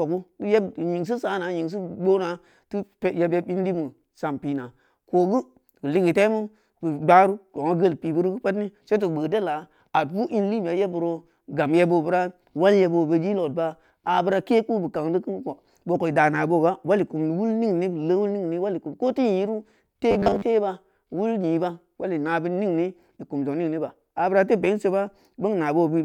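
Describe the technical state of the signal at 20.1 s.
At 20.1 s the audio turns into robotic sound from repeated short buffers, lasting from 20.11 to 20.42 s. The likely cause is audio arriving too seldom, so the software fills the gaps by looping a 10 ms slice, repeating most of the span while the real signal is skipped. That loop imposes a fixed 100 Hz metallic buzz. On a waveform, identical 10 ms cycles repeat; a spectrogram shows rigid, flat harmonic lines spaced at 100 Hz.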